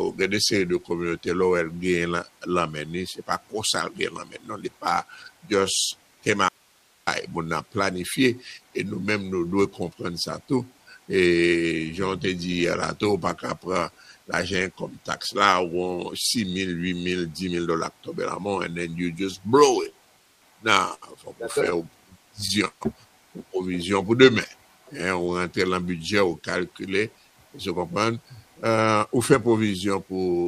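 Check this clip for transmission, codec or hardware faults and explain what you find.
There are a few clear transmission faults here, mostly in the back half of the clip.

From 6.49 to 7.07 s there's an audio dropout to a faint residue: the signal vanishes abruptly for about 0.58 s, leaving only hiss roughly 35 dB down. The likely cause is the signal being lost while the path after the break stayed live.

Repeated stalls (stutter) show up twice, from 19.41 to 20.41 s and again from 21.70 to 22.83 s. Late packets kept draining the jitter buffer, so the receiver stretched the last sound each time. The first stretch has 8 short holds, the longest 58 ms. The second has 10, the longest 129 ms. Nothing is lost, but it drags and judders.

Between those, from 20.94 to 21.04 s, there's a short stall from a late packet: one packet arrived 76 ms late, so a sound hangs on too long before carrying on.

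From 25.28 to 28.51 s there's a jitter buffer speed-up. The receiver trimmed tiny pitch-period slices to shed about a third of a second of backlog, so the sound runs about 7% fast at unchanged pitch and feels hurried.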